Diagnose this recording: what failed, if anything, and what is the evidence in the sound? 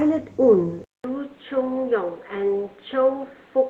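Capture stage. At 0.84 s, 200 ms of silence, then duller, quieter speech cut at 4.3 kHz, with new background noise. The input likely switched to a poorer device.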